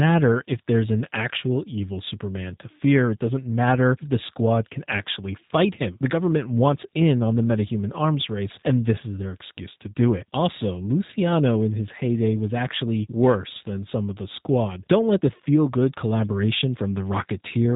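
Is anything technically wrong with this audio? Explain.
Yes. Throughout the speech, the sound is plainly rough and slightly synthetic, with nothing above 3.8 kHz. This is G.729 codec damage, consistent with an 8 kbit/s stream: each 10 ms frame is rebuilt from a vocal tract model, pitch prediction and a few pulses, discarding fine detail.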